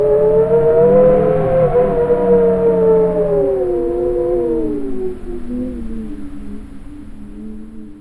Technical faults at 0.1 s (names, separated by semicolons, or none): none